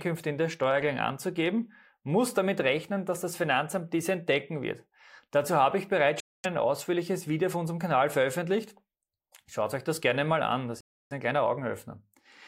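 At 0.64 s, between "in der" and "anzugeben muss damit rechnen", a single sharp click cuts through the speech. This is likely dropped samples: a couple of samples went missing, so the waveform leaps abruptly to a later value, far too briefly to remove any sound.

At 6.20 s, right after "habe ich bereits", the speech cuts to silence for about 239 ms and then resumes. At 10.81 s it happens again after "gerne mal an das", a 304 ms gap before "ein kleiner". Both are likely Bluetooth stalls, where delayed packets let the headphones' buffer run empty until playback could continue.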